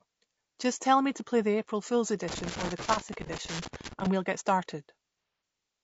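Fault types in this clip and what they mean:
Low-delay AAC compression: The speech was likely encoded with AAC-ELD, the short-frame codec used for video calls, at a rate that fits about 32 kbps. Frames of roughly 30 ms leave few bits to spare at this rate, so the voice throughout the clip sounds plainly rough and grainy, with noise filling the gaps between harmonics and a top band that sounds thinned or synthetic.
Loose connector crackle: A worn or dirty contact in the signal path kept making and breaking as it shifted, chopping the signal on and off many times a second. From 2.28 s to 4.07 s the speech is overlaid with an irregular burst of crackling and scratching, uneven in density, lasting nearly two seconds. This is separate from the codec texture that runs through the whole clip.
AAC frame loss with concealment: Coded frames went missing, and the decoder covered the gaps by rebuilding audio from the last good spectrum. 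From 3.26 s to 3.31 s a 30 ms gap, pointing to a single lost frame, leaves a brief smeared, noisy blip inside the crackle. From 5.18 s to 5.42 s losses scattered over 240 ms, with the longest run around 150 ms, produce a longer phasey, washed-out stretch.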